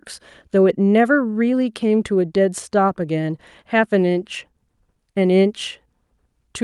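Speech carried over a call codec path with its top end rolled off above about 12 kHz, and there is no technical fault to report.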